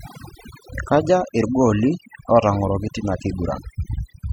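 A noise reduction stage set far too strong runs throughout, gating bands near its noise estimate, so this overdone noise removal leaves twinkling near-silence and takes quiet parts of the voice with it.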